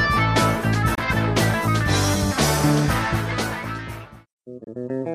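At 0.95 to 0.99 s and again at 4.64 to 4.68 s the audio cuts to silence for about 37 ms, then resumes further along with about 23 ms of audio lost, consistent with a likely Bluetooth dropout where one late packet, roughly a single codec frame, was discarded.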